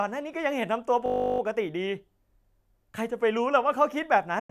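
At 1.06 s a system hang loop repeats one 20 ms slice until 1.4 s, giving a 50 Hz buzz. The waveform shows identical tiling, and the spectrogram shows evenly spaced harmonic stripes.

From 4.39 s a digital broadcast dropout fades over 8 ms to silence for about 96 ms, which fits four lost frames. The waveform flattens and the spectrogram goes blank to the end.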